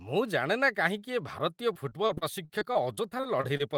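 Repeated packet loss sets in from 1.73 to 3.61 s: packets keep going missing, and each hole is patched by stretching the preceding sound, about 0.3 s in all, with the longest gap near 39 ms. The speech turns choppy and robotic, with clipped fragments.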